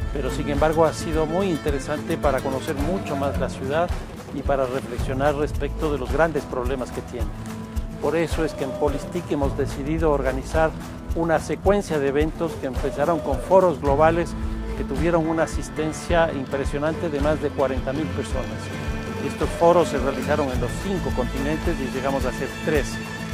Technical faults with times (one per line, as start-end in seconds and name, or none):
none